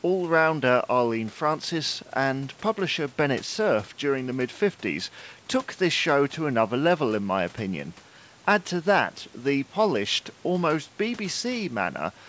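No faults turn up in this speech recording; it carries the ordinary sound of a wideband call link, with nothing above 8 kHz and the usual coding noise such a codec leaves, and the low-bass trim from the call's microphone processing is normal.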